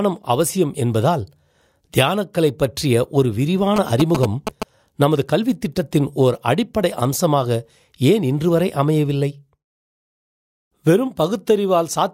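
From 3.76 to 4.63 s, a galloping dit-dit-dit of short 217 Hz buzzes, about as loud as the speech: GSM signalling bursts from a nearby 2G phone, rectified by the audio circuit.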